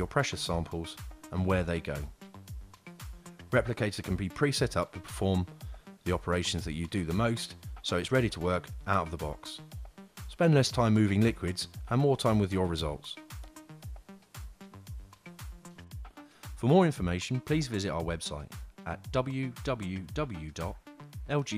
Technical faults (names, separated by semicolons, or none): none